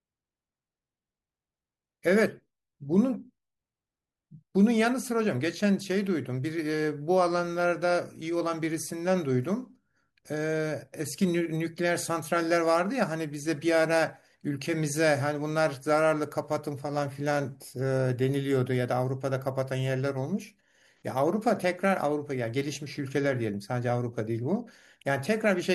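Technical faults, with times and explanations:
No technical faults detected in the speech audio.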